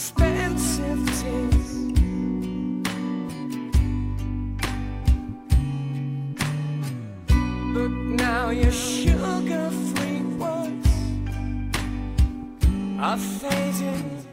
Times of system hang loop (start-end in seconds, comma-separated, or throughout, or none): none